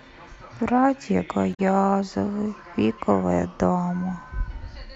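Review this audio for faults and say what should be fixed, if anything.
At about 1.53 to 1.60 s there's a short burst of damaged data in the compressed stream: bytes arrive wrong, the decoder misreads those frames and loses sync, and you get a quick garbled blip. Checksumming files or streams in transit would catch and prevent it.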